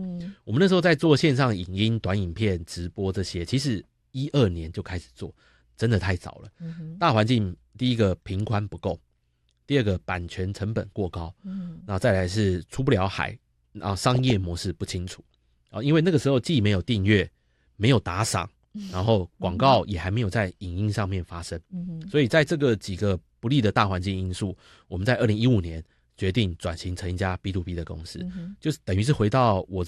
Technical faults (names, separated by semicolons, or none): DAB burbling